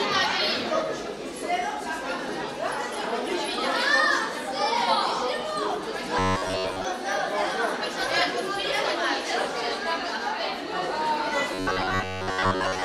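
From 6.19 to 6.85 s, and again from 11.54 s to 12.84 s, the sound turns into a rigid, metallic buzz pitched at about 93.8 Hz. This is robotic sound from repeated short buffers, likely caused by audio arriving too seldom, so a slice of about 10.7 ms is replayed over and over while most of the real audio is skipped. Unlike plain dropouts, there is no silence: a fixed drone replaces the audio while still loosely following its shape.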